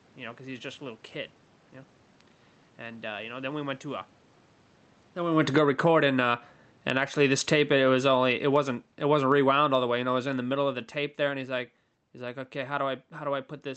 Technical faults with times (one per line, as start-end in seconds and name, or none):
5.37-6.08 automatic gain falling
5.82-8.49 automatic gain rising
6.64-11.80 automatic gain falling